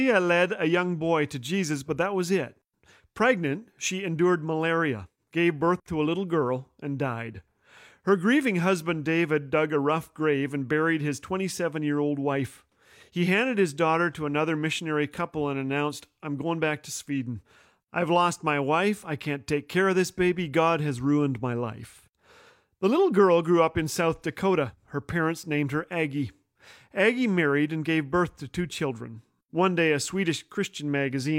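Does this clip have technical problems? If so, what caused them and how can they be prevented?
No, nothing in this speech clip needs fixing.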